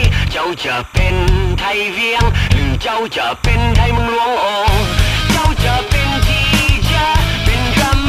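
Timecode bleed runs through the whole clip: linear timecode, framed at 29.97 per second, leaks in from an adjacent track or cable, its square wave flipping between tones near 1 and 2 kHz. About 25 dB under the sound, it chirps steadily. A spectrogram shows two continuous bands.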